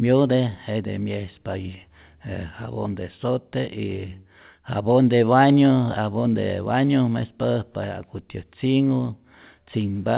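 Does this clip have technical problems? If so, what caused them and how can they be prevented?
No, this clip has no technical problems.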